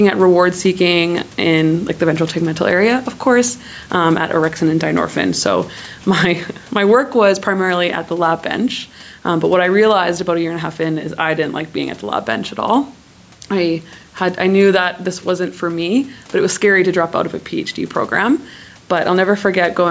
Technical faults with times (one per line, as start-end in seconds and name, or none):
0.00-19.90 gain pumping